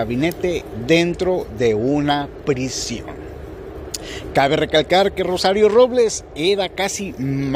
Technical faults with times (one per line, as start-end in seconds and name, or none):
none